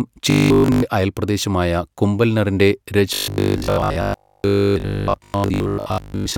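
Audio likely arrived too seldom, so a short stretch was replayed in a loop, causing robotic sound from repeated short buffers. From 0.30 to 0.82 s, just before "അയൽപ്രദേശമായ കുംഭൽനറിൻ്റെ", the sound is entirely replaced by a rigid, metallic 50 Hz buzz, which fits a 20 ms buffer. The same buzz returns from 3.14 to 6.36 s, right after those words, with most of the sound repeated.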